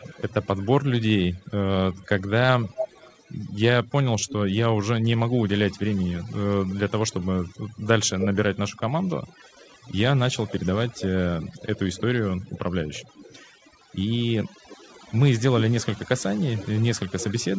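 From the first second to the end, the speech carries overdone noise removal. The suppressor was set so hard that it pulls individual frequency bands down whenever they sit near its noise estimate, and the softer parts of the speech get dragged down with them. So the gaps fall to near silence with little twinkling specks, all within a band that stops around 8 kHz, as you'd expect from a call path like G.722.

Over the first 4.57 seconds there's a faint delayed copy of the speech trailing about 285 ms behind, very low, something like 25 dB under the main signal. It drops out, then comes back from 6.69 s to the end at roughly 302 ms delay and a bit louder, around 20 dB down. The likely cause is an echo leak: someone on speakerphone whose echo canceller didn't catch everything its microphone picked up, so the remainder got sent back down the line.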